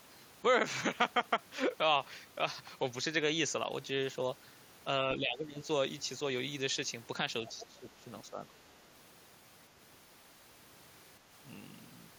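From 5.17 to 5.63 s, the speech dips by roughly 15 dB. This is speech suppressed in double talk. Both sides were likely talking at once. The echo canceller could not tell the near talker from the loudspeaker echo, so it turned everything down.

At 7.47 s, for about 50 ms, a faint second voice slips through. It sits roughly 20 dB below the speech. This is the other side's voice leaking through. The echo canceller likely left a scrap of the loudspeaker signal in the microphone feed.

Right after, from 7.55 to 8.06 s, the speech is suppressed again, by roughly 15 dB. It sounds ducked. The cause is likely the same double talk confusing the canceller.

From 8.24 to 8.53 s, a shallower dip of roughly 10 dB follows. The speech dips briefly, then recovers. This too is likely suppression during double talk.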